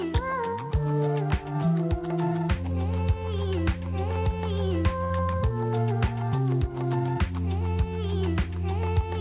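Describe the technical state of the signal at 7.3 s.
At 7.3 s the signal is intact, with no fault, carried by a call path whose content stops at 4 kHz, which fits a narrowband G.711 mu-law link at 64 kbps.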